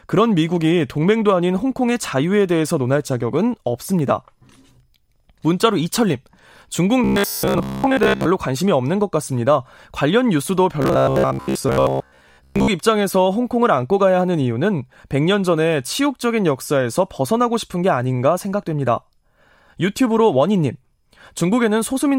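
From 7.04 to 8.27 s and again from 10.82 to 12.68 s the speech turns into robotic sound from repeated short buffers: a rigid, metallic buzz at 66.8 Hz that loosely tracks the speech. The likely cause is new audio arriving too seldom, so a segment of about 15 ms is looped while most of the real audio is dropped. A spectrogram shows evenly spaced 66.8 Hz harmonic stripes, and the waveform shows identical repeating cycles.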